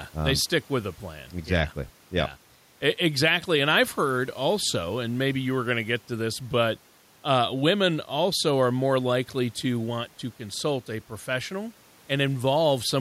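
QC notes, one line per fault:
Nothing stood out on listening to this speech recording.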